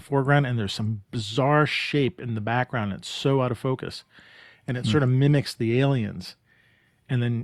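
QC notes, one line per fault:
No fault found in this speech clip.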